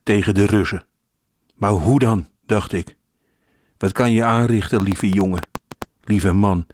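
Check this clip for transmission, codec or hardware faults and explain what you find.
One fault stands out: a train of clicks from 4.80 to 5.83 s. About ten sharp pulses of similar shape arrive at an uneven pace, roughly 8.8 per second, and peak around 10 dB above the speech, so they tick through the sound instead of blending in. The likely cause is an external pulse source, such as interference or a faulty connection. Unlike codec crackle, the pulses have a repeated shape and the speech beneath them keeps Opus's light hybrid-mode coding.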